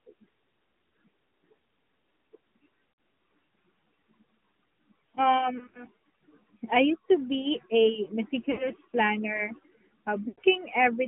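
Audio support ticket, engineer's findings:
AMR narrowband mobile codec, full clip: speech band-limited to 200 Hz–3.4 kHz, buzzy synthetic texture from pulse-excited vocal-tract model; plainly audible damage, consistent with a mid-rate mode around 10 kbps.

Lost AMR speech frames at 2.92–2.98 s, 5.58–5.84 s, 8.52–8.68 s, 10.28–10.40 s: decoder stretches the last good pitch and spectrum with falling gain, giving brief drawn-out warbles and dips. Gaps total 60, 80, 60 and 100 ms. The second event is scattered over 160 ms, with four 20 ms frames lost; the events lose three to five frames each. Onsets return weak for a moment.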